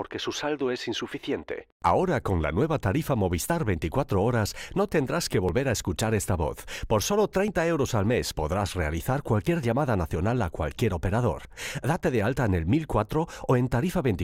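At 1.51, 3.50, 5.49, 7.48, 9.47, 11.45 and 13.44 s, a tiny click or skip is heard. This is overlap between stream segments. Adjacent segments claim the same few milliseconds, and the player trims real sound. The waveform jumps. The skips recur about every 2 s.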